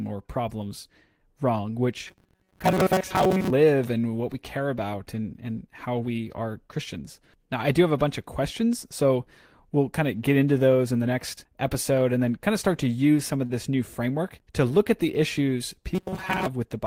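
From 2.07 to 3.50 s, right after "or problems wrong", the speech goes to a stiff metallic buzz at 188 Hz until "and what we care". That's robotic sound from repeated short buffers: most of the audio is likely being replaced by loops of roughly 5 ms. It comes back from 15.95 to 16.48 s, after "look at the issues".

Between "use some of" and "this new framework to", at 13.46 to 13.52 s, there's a short stall from a late packet. The last sound gets held for 33 ms while the receiver waits, nothing is lost, and everything after runs 33 ms later.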